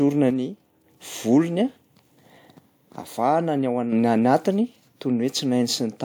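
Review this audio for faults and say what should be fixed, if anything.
One channel drops out from 0.30 to 0.84 s and again from 3.01 to 3.92 s, just before "ny anatiny". In both spans the speech abruptly falls by about 6 dB and then returns to full level. The likely cause is one side of a stereo source going silent, so after folding to mono only half the shared signal remains, and anything that existed only on the lost side vanishes entirely. To prevent it, secure the stereo connections and monitor each channel separately during capture.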